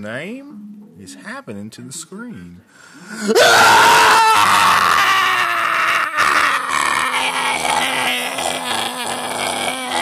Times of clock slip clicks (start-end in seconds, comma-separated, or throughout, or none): 0.16-9.98